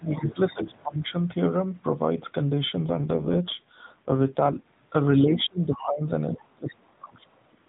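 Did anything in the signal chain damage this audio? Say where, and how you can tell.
Yes. Call processing: from 0.0 to 1.16 s the speech is pulled down by about 15 dB in patches, about a second in all. This is speech suppressed in double talk. The likely cause is an echo canceller that could not tell far-end echo from the talker while both spoke, so it turned down both. Unlike a fade, the dips come and go in patches.

Call processing again: from 0.18 to 0.35 s a second voice leaks through at about 10 dB below the speech. This is the other side's voice leaking through, likely residual loudspeaker echo the canceller left in the microphone path. It is a separate voice, not a smear of the talker's own.

Network and codec: from 2.84 to 4.66 s the speech turns rougher and more synthetic with no gap and no loss of band. This is an AMR rate drop from 12.2 to 5.9 kbps, as the link traded speech bits for error protection. 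The light narrowband AMR-NB coloring elsewhere is the codec at its full rate.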